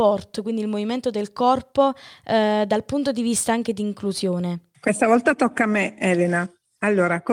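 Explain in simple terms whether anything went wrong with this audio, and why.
Nothing went wrong with this audio; no faults can be heard anywhere in the recording.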